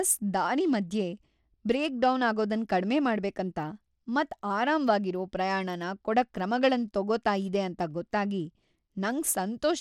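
From start to finish the speech carries plainly audible coding damage, likely Bluetooth SBC compression at a low bit pool, consistent with roughly 96 kbps. The coarsely quantised sub-bands leave a gritty, aliased edge on the sound, the treble flickers, and nothing remains above 17.4 kHz.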